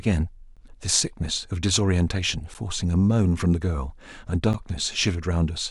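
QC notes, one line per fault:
0.56–4.54 s, periodic USB or driver dropouts: roughly every 2.0 s the audio path stalls and about 10 ms of the speech is replaced by silence, leaving regular ticks. The waveform shows short flat gaps. The spectrogram shows thin, evenly spaced vertical broadband lines.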